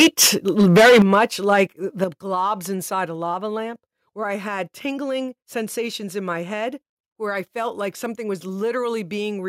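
From 0 to 0.28 s and 0.59 to 1.23 s the speech is harsh and crackly, likely from microphone overload about 10 dB past full scale. The waveform shows flat-topped peaks, and the spectrogram shows broadband smear. A milder flattening follows at 1.49 to 1.61 s. The microphone volume is stepped down at 1.02 s (about 9 dB), 2.04 s (about 7 dB, just before "globs inside a lava") and 3.06 s (about 2 dB, between "globs inside" and "a lava lamp where"). Each is likely an automatic gain correction and shows as a sudden drop in the waveform envelope.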